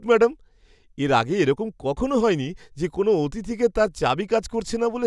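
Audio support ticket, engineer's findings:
No faults found in speech.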